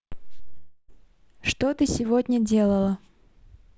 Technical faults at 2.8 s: none

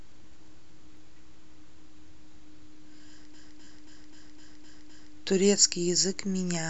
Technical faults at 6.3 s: none

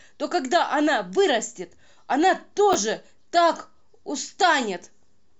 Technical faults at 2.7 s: chunks out of order

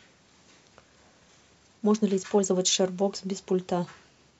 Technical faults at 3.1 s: none

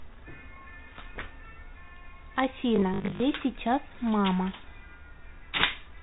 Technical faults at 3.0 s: packet loss with last packet repeated

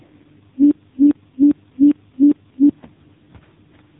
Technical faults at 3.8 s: AMR narrowband mobile codec

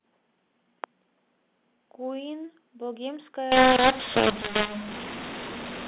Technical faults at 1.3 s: none

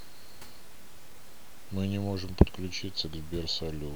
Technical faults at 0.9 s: none

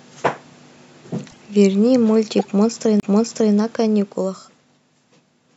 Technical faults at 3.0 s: CD skip

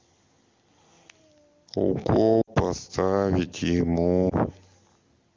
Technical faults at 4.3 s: lost AMR speech frames

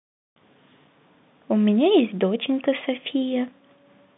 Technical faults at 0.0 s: none

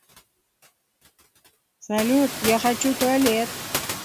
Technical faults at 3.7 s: noise suppressor artifacts; block size mismatch (padded)

